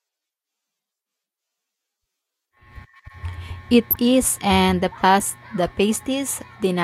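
Corrupt frame decoded twice in this speech. Flipped bits inside compressed frames were passed to the decoder, which played them anyway, so misread gains and codes put energy at the wrong frequencies. From 3.91 to 3.96 s a run of several damaged frames gives a loud, harsh burst peaking around -5 dBFS. At 5.2 s a shorter, smaller corruption yields a brief blip reaching roughly -15 dBFS.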